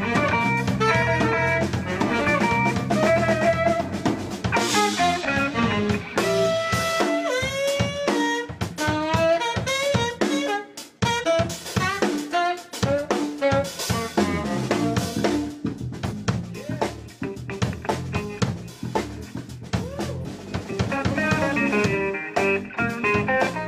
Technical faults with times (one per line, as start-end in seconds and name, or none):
5.20-5.26 damaged data in a compressed stream
11.20-11.24 damaged data in a compressed stream
16.07-16.13 damaged data in a compressed stream
20.20-20.26 damaged data in a compressed stream